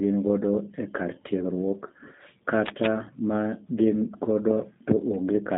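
Throughout, the speech passes through a G.729 codec, consistent with an 8 kbit/s link. Nothing above 3.8 kHz survives, so it sounds muffled, rough and synthetic.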